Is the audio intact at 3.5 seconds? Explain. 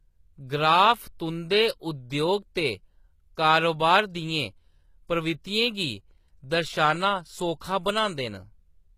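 No. HE-AAC compression, likely the cause, runs through the whole clip, including 3.5 s. The treble above the coded band is copied up from lower bands and roughly reshaped, so harmonics misalign and s sounds turn gritty and lispy, fitting a bitrate around 20 kbps, with nothing above 14.9 kHz.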